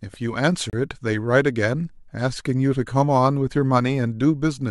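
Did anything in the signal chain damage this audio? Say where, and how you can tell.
Yes. At the playback stage, a gap between stream segments opens from 0.70 to 0.73 s, a hole of about 31 ms in the speech. The time stamps of adjacent segments don't meet, so the player pads the mismatch with silence. Nothing is removed; the speech resumes intact after the hole. On the waveform it appears as a flat line with abrupt, clean edges, and on the spectrogram as a sharp vertical blank band across all frequencies.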